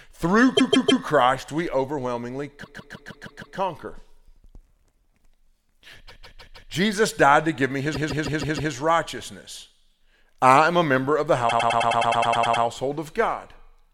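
Repeated frames stutter the speech at 0.56–1.03 s, 2.63–3.57 s, 6.08–6.70 s and 7.93–8.71 s. The same 157 ms block replays 3, 6, 4 and 5 extra times. At 11.48–12.63 s a 105 ms block repeats 11 extra times. Each repeat makes the clip run longer.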